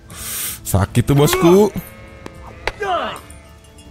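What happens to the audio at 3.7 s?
Nothing goes wrong at 3.7 s; the audio plays through that moment intact, with no fault to be heard.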